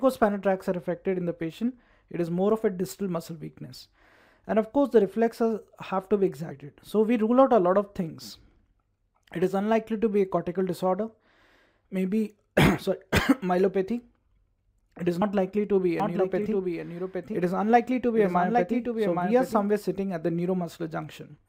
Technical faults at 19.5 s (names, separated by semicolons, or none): doubled audio track